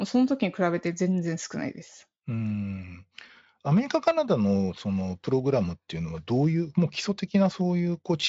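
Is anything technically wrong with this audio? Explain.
No, nothing in this speech recording stands out as a technical fault. It has passed through Speex coding at a high setting, around 34 kbps, and leaves at most faint traces, with the top of the band ending near 7.7 kHz.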